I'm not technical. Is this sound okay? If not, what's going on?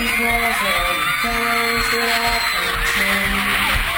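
No. Imaging from sample-and-hold upsampling runs through the whole clip. The rate was raised by simply repeating each sample, which fits a 24 kHz recording doubled to 48 kHz, so a mirrored copy of the sound leaks in between 12 and 24 kHz as a bright metallic fizz.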